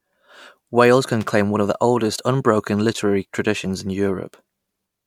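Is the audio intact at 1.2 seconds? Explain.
No. From 1.21 to 1.29 s the speech is broken by loose connector crackle. It lasts about 80 ms. A worn or dirty contact in the signal path is making and breaking its connection as it shifts. Each break chops the signal off for an instant. Any DC on the line turns the reconnections into pops. The result is a short, irregular burst of scratchy crackle laid over the speech.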